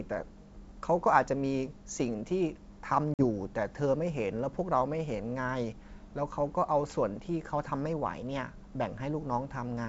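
At 3.14 s there is packet loss on an ADPCM call: about 50 ms of audio, a handful of packets, drops to silence with hard edges. The G.722 decoder's predictor and step size lose track, so the speech re-enters slightly distorted, settling by 3.24 s.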